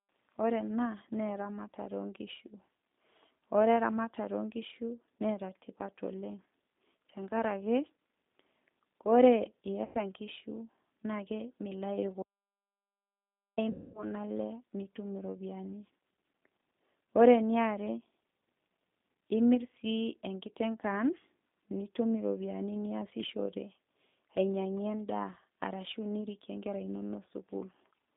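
From start to finish the speech passes through the G.729 codec at 8 kbit/s, held to a line band of about 150 Hz to 3.7 kHz. Everything above that is gone, and the rebuilt voice has a plainly audible rough, synthetic edge. That edge comes from the codec modelling each short frame with a filter, a pitch predictor and a few pulses, not from noise or clipping. Because it is present throughout, it is distinct from the brief events that follow.

At 9.85 to 10.01 s, just before "nkishu nake milayu", there is VoIP packet loss concealed by the speech codec. About 100 ms went missing, which fits five 20 ms packets. The decoder stretches the last sound into a buzzy tone or coloured noise that fades instead of leaving a hole. The voice stays weak or distorted as it recovers, because each frame builds on the one before.

From 12.22 to 13.58 s, right after "nkishu nake milayu", comes an audio dropout to silence lasting 1.35 s. 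The sound cuts to silence with no room tone and no tail. The abrupt silence, rather than a fade, sets it apart from concealment and points to a lost input, likely a link failure or mute.

Straight after, at 13.70 to 14.06 s, concealment returns for a longer 240 ms, consistent with twelve packets.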